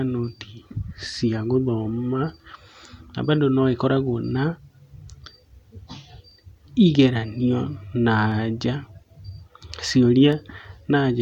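Periodic USB or driver dropouts recur about every 2.0 s from 0.28 s to 10.33 s, roughly seven in all. Each time, something stalls the audio path and a tiny fraction of a millisecond of speech is skipped outright, leaving evenly spaced ticks that sound only while signal is present.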